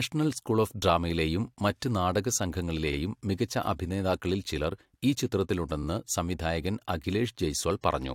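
Repeated frames at 2.92 s and 5.82 s: a 42.7 ms block, which fits two compressed frames, plays twice, causing a brief stutter.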